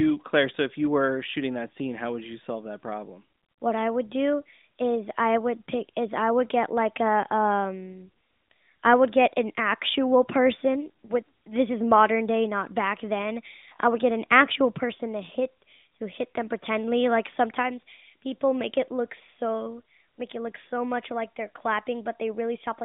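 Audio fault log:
Nothing stood out on a careful listen to this speech recording.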